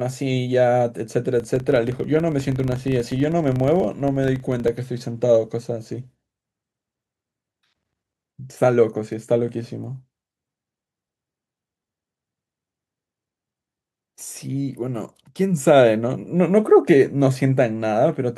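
From 1.36 s to 4.75 s, the speech carries a filter restarted on every block: its state is discarded at each block boundary, so each block starts from zero with a small transient. The result is a buzz at 25 Hz, pointing to 40 ms blocks, that rises and falls with the speech level.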